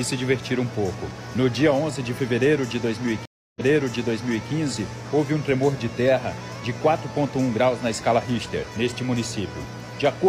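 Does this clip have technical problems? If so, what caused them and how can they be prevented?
Yes. A stream reconnect at 3.25–4.49 s: the connection dropped, leaving 0.3 s of silence, then a fresh decoder resumed 0.93 s earlier with a fade-in. Prevent it with larger client buffering and a server that resumes at the exact position.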